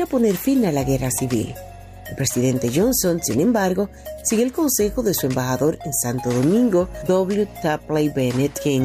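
Nothing in the recording stood out as a technical fault on listening.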